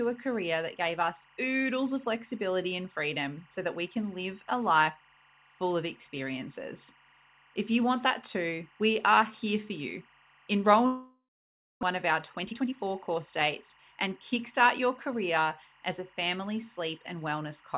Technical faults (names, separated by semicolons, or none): timecode bleed; long network dropout; jitter buffer speed-up